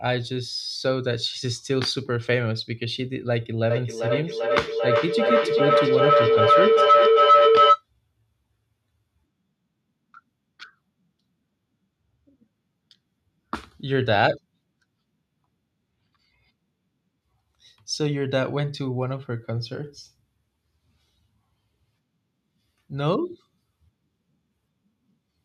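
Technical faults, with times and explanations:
3.70 to 7.85 s, feedback howl: a microphone and loudspeaker share one room on the same call, and each trip around that loop returns the sound louder than before. Rather than dying away, the repeats swell and narrow onto the frequency the loop favours, here a tone of roughly 1.5 kHz. It pulses at about 0.4 s intervals, the loop's round-trip delay, peaks at about 8 dB above the speech, and stops at 7.85 s.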